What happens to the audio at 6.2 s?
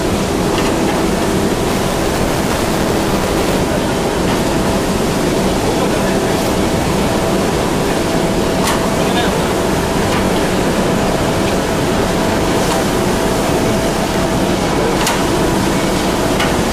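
At 6.24 to 6.26 s, overlapping chunks replay a 21.33 ms slice at a join between 4 s chunks, producing a brief click-like stutter.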